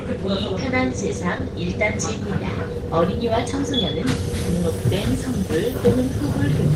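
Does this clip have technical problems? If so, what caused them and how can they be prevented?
Yes: short concealed packet loss at 1.38 s and from 3.51 to 3.54 s. Late packets left gaps that the receiver patched by extending the preceding sound, giving a brief smear rather than the hard silence of a dropout. A jitter buffer with enough depth, on a stable network, prevents it.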